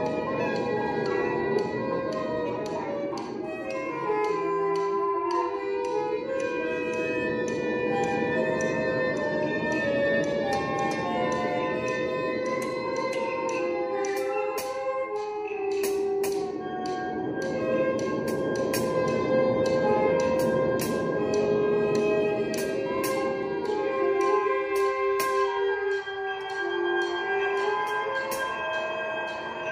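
No technical faults are audible.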